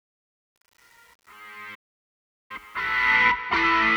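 An everyday-sound recording fades in over its first 3.15 s, and that fade carries truncation distortion from 0.00 to 3.15 s, worst up to 2.84 s: an 8-bit, undithered gain stage rounds the quiet waveform into coarse square steps, so the sound comes in gritty. A waveform view shows staircase blocks, and a spectrogram shows broadband grit. A playback stall cuts the sound to silence from 1.74 to 2.51 s, about 0.75 s, likely because the player ran short of data or its thread was blocked. This appears as a flat gap in the waveform and an empty vertical band on a spectrogram before the sound resumes.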